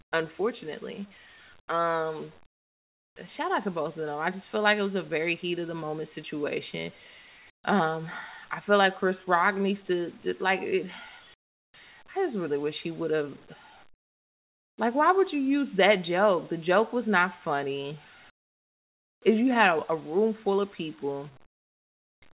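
Speech over a narrowband call path, with nothing above 4 kHz, has comfort noise in place of the background in its pauses at 0.02–0.12, 1.6–1.68, 2.46–3.16 (before "shout out to both"), 7.5–7.64, 11.34–11.74 (between "to to like it" and "I just really wish"), 13.94–14.78, 18.3–19.22 and 21.46–22.22 s (after "room full of people"). The real room tone drops by about 13 to 29 dB to a flat, featureless hiss, likely from discontinuous transmission. On a spectrogram these gaps show as smooth, uniform low-level bands, and on a waveform as abrupt dips to a thin, even floor.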